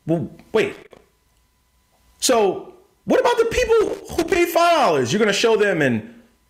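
At 0.72 to 1.02 s and again at 3.81 to 4.36 s, loose connector crackle: a worn contact making and breaking chops the signal into irregular scratchy bursts, unlike evenly spaced digital clicks.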